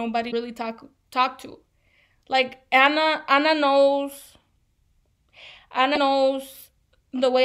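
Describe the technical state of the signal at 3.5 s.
At 3.5 s the speech signal is intact, with no dropout, distortion, glitch or other technical fault.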